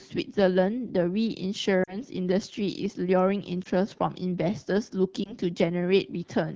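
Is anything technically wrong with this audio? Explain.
Yes. Lost AMR speech frames cause brief dropouts at 1.84 to 2.01 s, 3.63 to 3.68 s and 5.24 to 5.34 s. The wideband AMR decoder conceals them by repeating its last good settings at falling gain. The speech smears and dips, and the longer first gap suggests two consecutive lost frames.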